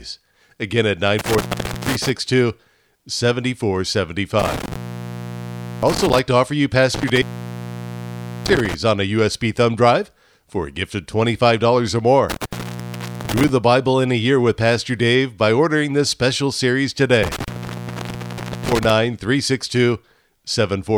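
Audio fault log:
1.19–2.09 s, 4.39–6.19 s (ending before "to offer you"), 6.94–8.74 s (between "to offer you" and "on a"), 12.30–13.49 s and 17.23–18.90 s (after "ordering this special series"), intermittent contact: the speech drops out with crackle at each edge and faint hiss in the gaps, for about 0.47, 1.07, 1.23, 0.76 and 1.17 s. A loose cable or plug repeatedly breaking the signal path would sound like this.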